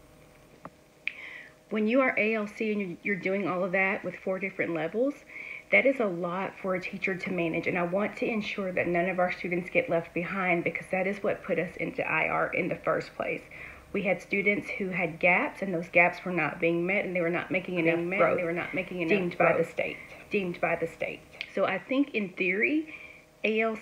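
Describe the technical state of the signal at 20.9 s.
At 20.9 s the signal carries a doubled audio track, running from 17.76 s to 21.44 s. A second full-band copy of the sound sits roughly a second and a half behind the original at about the same loudness, likely from the audio being captured again through a slower path. Unlike an echo or reverb tail, the copy never decays and has no room colouring, there is only one repeat, and it starts and stops abruptly.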